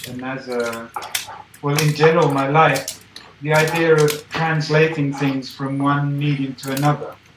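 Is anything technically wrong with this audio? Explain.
No, no technical faults are audible.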